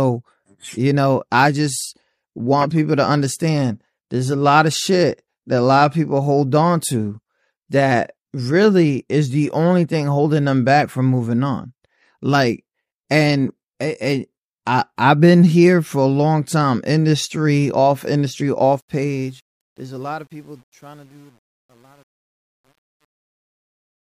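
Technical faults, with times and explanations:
18.64–24.04 s, truncation distortion on a fade: the fade-out that starts around 18.6 s turns gritty at its quiet end, and from 19.78 s to 24.04 s the grit is at its worst. The volume stage keeps too few bits and adds no dither. As the level falls toward the smallest step, the waveform collapses into a few square steps, which fits a resolution of about 9 bits.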